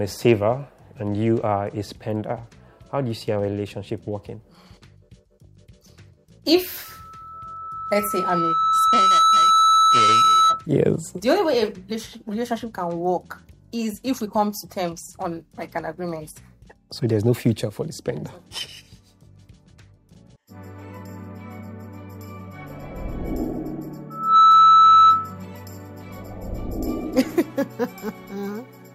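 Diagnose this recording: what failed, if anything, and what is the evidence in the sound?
Loudspeaker feedback squeal in the acoustic loop ahead of the converter: a 1.3 kHz tone swells from 6.84 to 10.66 s over about two seconds, then returns faster and louder from 24.10 to 25.39 s. Loop gain exceeds one there. Unlike steady interference, it grows rather than starting full-level.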